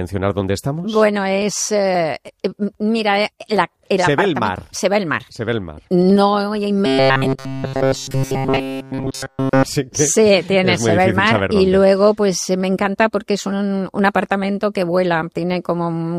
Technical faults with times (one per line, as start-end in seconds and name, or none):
6.86-9.64 robotic sound from repeated short buffers